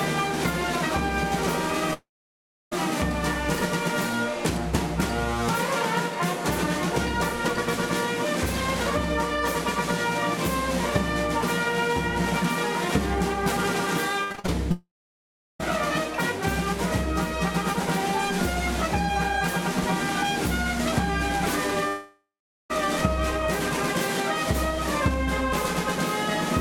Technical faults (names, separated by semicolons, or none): long network dropout; repeated packet loss (robotic sound)